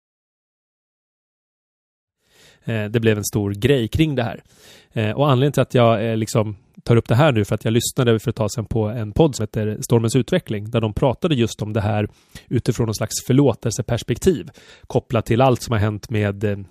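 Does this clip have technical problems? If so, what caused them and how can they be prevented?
No, the speech fades in smoothly from roughly 2 s to 2.89 s, as an edited fade-in should, and nothing calls for a cause or a fix.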